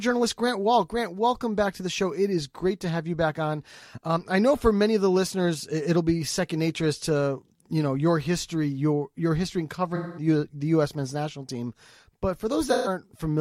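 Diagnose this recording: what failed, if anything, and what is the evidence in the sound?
AAC frame loss with concealment, codec stage: after "your your history in" (9.95–10.27 s) and at 12.66–12.88 s, repeated spectra smear the sound instead of cutting to silence.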